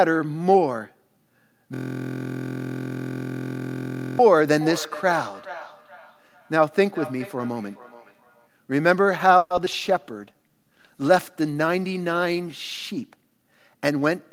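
From 1.75 to 4.19 s the speech gives way to a steady 43.1 Hz buzz: one 23.22 ms slice repeating exactly, about 105 times. This is a system hang loop. The machine froze while the sound hardware kept replaying its ring buffer, which fits a 1024-sample buffer.

Between 4.32 and 8.55 s, each stretch of speech comes round again at intervals of roughly 0.4 s, thinner and ringier each pass, peaking at about 16 dB below the speech. This is feedback echo between two devices: one device's playback is captured by the other's microphone and sent back, beyond the reach of either echo canceller.

From 9.37 to 9.75 s the sound turns choppy, with four holes, the longest 130 ms, and 42% of that span patched over. This is repeated packet loss. Packets kept going missing, and each gap was filled by stretching the last sound.

From 9.79 to 14.28 s the speech goes rough and muffled, with the top end dulled, and stays at its worst for 2.95 s. 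This is a call bitrate drop, and the sound points to the encoder falling from around 64 to 20 kbps after the bandwidth estimate collapsed.

Within that stretch, 10.14 to 10.49 s drags at 82% speed with unchanged pitch, drawn out by 73 ms. This is a jitter buffer slow-down: the receiver repeated pitch periods to rebuild a depleted reserve.

From 13.16 to 14.11 s the speech hurries at 110% speed, pitch intact, losing about a tenth of a second. This is a jitter buffer speed-up. The buffer had overfilled, so the receiver trimmed short pitch-period pieces to cut the delay.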